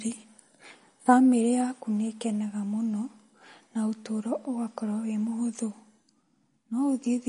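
Throughout, the speech has a hard treble ceiling near 10.6 kHz and a watery swirl, likely from MP3 compression at a low bitrate around 40 kbps; spectrograms show a flat cutoff and flickering holes.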